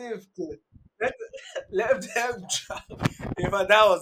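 De-emphasis applied wrongly from 0.0 to 2.0 s: a treble cut went onto the speech, dropping 10 kHz about 13 dB below 1 kHz, so everything sounds dull and muffled.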